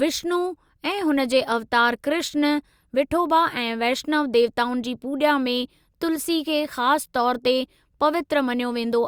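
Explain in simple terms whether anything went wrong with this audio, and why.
Nothing went wrong with this recording, so there is no fault to explain.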